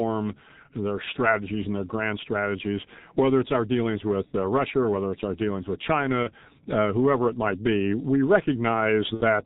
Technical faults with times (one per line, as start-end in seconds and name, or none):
0.00-9.45 G.723.1 codec
6.23-6.30 VoIP packet loss concealed by the speech codec
9.14-9.22 VoIP packet loss concealed by the speech codec